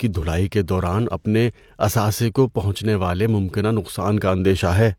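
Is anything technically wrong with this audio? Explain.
No, nothing in this speech recording shows a technical problem; the signal holds steady and intact throughout.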